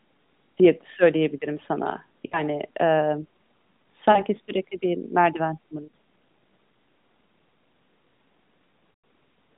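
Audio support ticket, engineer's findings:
Lost AMR speech frames, 2.26–2.43 s, 4.12–4.22 s, 5.84–5.93 s, 8.92–9.04 s. Dropouts of 60, 40, 80 and 120 ms, roughly three, two, four and six 20 ms frames. Decoder concealment repeats the last pitch and vocal-tract settings at falling gain: smeared, drawn-out sound fading toward silence, weak recovery after. Longest gap near 8.9 s fades furthest. Cause: radio errors failing frame checks on a narrowband AMR link, band about 150 Hz to 3.7 kHz, consistent with the 12.2 kbps mode.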